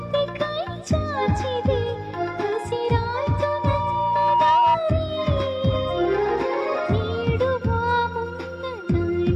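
From 2.54 s to 4.78 s, loudspeaker feedback squeal: a steady 950 Hz tone swells over about two seconds to roughly 5 dB above the sound. That slow, self-reinforcing rise at one pitch distinguishes it from a brief electrical whine.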